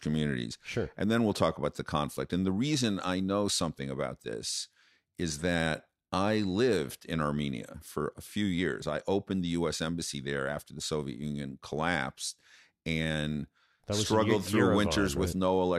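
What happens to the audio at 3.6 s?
Nothing goes wrong at 3.6 s; the speech there plays through intact, with no dropout, click, distortion or other fault.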